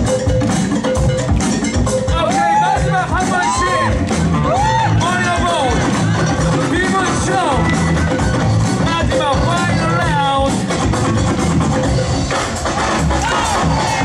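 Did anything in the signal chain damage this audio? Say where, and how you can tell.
Yes, there's one block of digital silence at about 10.02 s, and it points to the driver or buffer stage. The gap is only 0.73 ms, so you hear it as a single sharp tick. The signal drops straight to silence and jumps back with no fade. A block that short fits a 32-sample chunk the audio path didn't fill in time and sent out as zeros.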